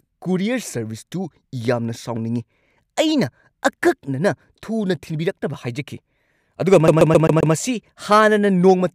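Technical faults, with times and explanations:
6.88–7.54 s, CD stuck on one turn: a scratch keeps throwing the laser back one track at the same point of each disc rotation, so a 132 ms slice of the speech plays five times in a row, with a brief mute at every jump. The result is a fast, perfectly even stutter. Unlike an echo or delay, nothing fades or overlaps. Each pass is an identical, full-level copy, cut off abruptly before the next.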